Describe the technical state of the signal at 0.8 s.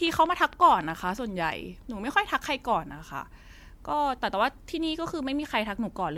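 At 0.8 s the speech sits inside a train of clicks that runs from 0.07 s to 1.19 s: a steady ticking at 10.8 clicks per second, about fifteen pulses in all, each rising a few decibels above the signal. The clicks share one shape and keep an even spacing, and they carry on through pauses. That regularity sets them apart from random crackle or scattered dropouts, and it points to a likely cause in interference from nearby equipment or a faulty connection pushing pulses into the path.

Underneath, the whole clip shows generation loss. The sound is swirly and hollow, and consonant attacks are smeared. Nothing extends above 20 kHz. The degradation is worse than a single pass at this quality would produce, which fits audio that was likely decoded and re-encoded several times as 96 kbit/s MP3. Each pass quantises on a shifted frame grid, so the spectral holes and noise build up. A single low-bitrate encode would sound dull or warbly in a steadier, less cumulative way.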